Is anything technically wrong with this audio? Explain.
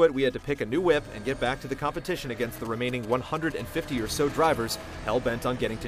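Yes. GSM signalling bursts run from 1.95 to 4.55 s. A 2G phone close to the audio path sends short groups of radio bursts while it signals to the network, and the circuitry rectifies them into audio. The result is a galloping dit-dit-dit of ticks and brief buzzes with a 217 Hz pulse rate. The interference sits roughly 20 dB below the wanted sound.

GSM phone buzz follows from 4.70 to 5.83 s, now with the phone in a call. Its transmitter pulses continuously at 217 Hz, and the rectified pulses become a steady, hard, raspy buzz rich in harmonics. The buzz has no connection to the programme material. It sits about 29 dB below the signal, so it is quieter than the signalling bursts but persistent.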